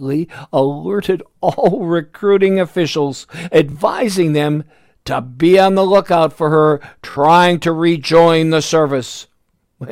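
Bluetooth stutter: packets arrived late or were lost, so the receiver replayed its last buffer. After "alerted all recruiting officials" (3.72 to 3.76 s) about 23 ms repeats, fitting one lost frame. After "the lookout for her" (7.11 to 7.17 s) about 46 ms repeats, fitting two. Speech then resumes further on, as though it had kept playing.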